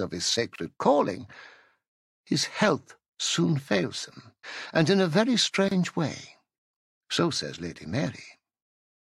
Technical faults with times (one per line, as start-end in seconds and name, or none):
0.56-0.58 gap at a join of encoded pieces
5.68-5.71 gap at a join of encoded pieces